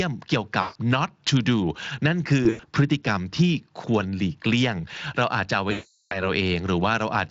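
Speech coded with Speex shows VoIP packet loss concealed by the speech codec at 0.61–0.77 s, 2.43–2.66 s (scattered dropouts) and 5.71–6.31 s (about 400 ms): sound smears into fading buzz or coloured noise, seen as flat, blurred spectrogram bands and a decaying waveform envelope.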